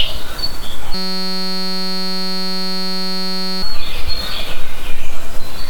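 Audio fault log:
0.94–3.63 s, system hang loop: the playback system stalled while the hardware kept replaying one tiny stretch of its ring buffer, about 5.33 ms long, which fits a 256-sample buffer. Repeated roughly 500 times, it fuses into a steady 188 Hz buzz.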